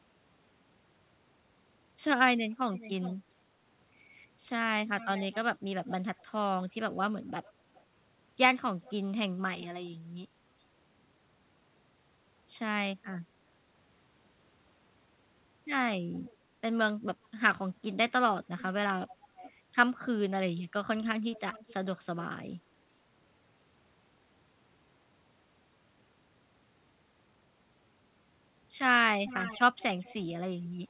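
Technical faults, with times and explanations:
2.75–3.16 s, 4.99–9.89 s, 13.03–13.18 s, 16.15–16.36 s, 18.44–21.74 s and 29.26–30.66 s: echo leak. A far-end echo canceller likely missed part of what its microphone picked up from a loudspeaker and sent it back. A second copy of the speech trails about 0.41 to 0.43 s behind, roughly 10 to 25 dB quieter.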